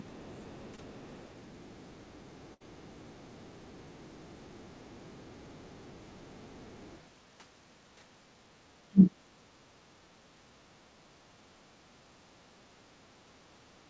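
Right at 0.76 to 0.80 s there's a short concealed packet loss. About 20 ms of the call didn't arrive in time, so the receiver stretched the preceding sound to cover the hole and blended back in. You hear it as a quick smear in the speech.

At 2.54 to 2.65 s comes a burst of packet loss. Roughly 60 ms went missing in a row. The decoder kept the last sound going for about 65 ms, fading it as it went, so there's a held, dwindling sound before the speech picks up again slightly further on.

From 8.89 to 9.16 s the speech suddenly drops away, by about 40 dB at its deepest, over about a third of a second. That's likely speech suppressed in double talk: the echo canceller couldn't tell this talker from the far-end echo and clamped down on everything. The band-limited sound of the call path, with nothing above 8 kHz, fits a G.722 codec.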